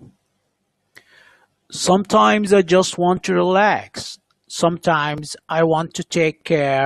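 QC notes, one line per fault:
5.29 to 6.85 s, Wi-Fi interference: a faint, regular ticking enters under the speech and continues to the end of the clip. The ticks repeat every 102.4 ms, just under ten per second, which is the beacon interval of a nearby Wi-Fi radio. Its bursts are picked up and rectified by the audio circuit, turning each beacon into a click. The ticking sits far below the speech, some 50 dB down.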